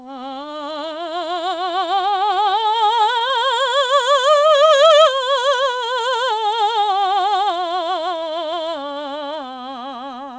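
From 2.10 to 3.32 s the music picks up brief ticks and small smears. These are scattered short gaps: about seven lost or late packets, each patched by extending the preceding sound for no more than about 15 ms. From 3.78 to 4.84 s the music drags to about 93% speed with the pitch unchanged. This is a jitter buffer slow-down, where repeated pitch periods add about 83 ms to refill a depleted buffer. From 6.85 to 7.15 s the playback rushes ahead to about 113% speed, upsetting the steady tempo. This is a jitter buffer speed-up, trimming about 50 ms of excess buffered audio. Throughout, the G.722 call path leaves nothing above 8 kHz.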